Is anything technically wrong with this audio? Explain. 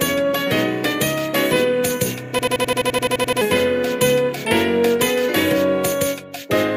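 Yes, there's a system hang loop from 2.39 to 3.41 s. The system froze while the hardware kept replaying its ring buffer, so one 85.33 ms chunk repeats 12 times at 11.7 Hz, a machine-gun stutter. That fits a 4096-sample buffer, and about a second of audio is lost.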